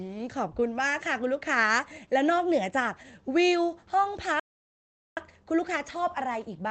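From 3.47 to 4.08 s the speech shows scattered short gaps: about four small packet losses, each patched by extending the preceding sound, roughly 40 ms concealed in total, the longest near 15 ms. They come through as brief ticks and slight smears in otherwise intelligible speech.

At 4.40 s a playback stall cuts the audio to silence for 0.77 s, resuming at 5.17 s. The output simply stops mid-flow, most likely because the player ran dry of buffered data or its audio thread was briefly blocked. Throughout, the speech stays band-limited to about 8 kHz by the Opus call path.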